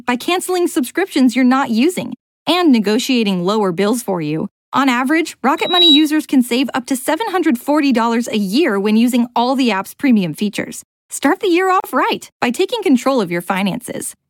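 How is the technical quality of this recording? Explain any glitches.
There is one glitch. At 11.80–11.84 s, a gap at a join of encoded pieces: untrimmed encoder delay and padding insert about 38 ms of silence, seen as a blank vertical strip with smeared edges.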